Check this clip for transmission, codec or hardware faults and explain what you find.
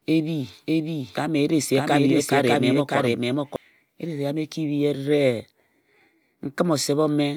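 One fault is present: a doubled audio track running from the start of the clip until 3.56 s. The likely cause is a second capture of the same signal through a slower path, or an edit leaving two copies misaligned, so the speech is mixed in twice. A full-band copy trails the original by roughly 0.7 s at about equal level, with no decay or room colouring. It is already sounding when the clip opens and cuts off abruptly at 3.56 s.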